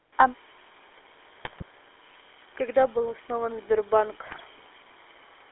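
Across the whole recording the speech has a buzzy, gravelly roughness, and the band is narrow, with little below 300 Hz and nothing much above 3.5 kHz. This is the GSM full-rate codec at work, and its damage is plainly audible. It rebuilds the vocal tract as a filter excited by sparse, regularly spaced pulses, so the fine texture of the voice is replaced by a coarse pulse train. The sound fits the 13 kbps full-rate coder on a 300 Hz to 3.5 kHz line.

From 1.40 to 1.63 s the voice breaks into squawks and gargling, and again from 4.26 to 4.41 s. These are GSM bit errors. Corrupted bits reached the decoder and scrambled its filter, pitch and gain values, so the spectrum bends and the level jumps from one frame to the next. The second burst has a higher error rate, around 3 percent against nearer 2 percent in the first.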